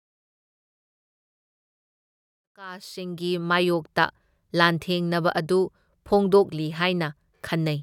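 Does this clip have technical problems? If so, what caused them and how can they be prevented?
No, the signal shows no technical problems: the smooth fade-in that begins around 2.5 s reaches full level at 3.82 s without any click or hard edge, as an editor would shape it.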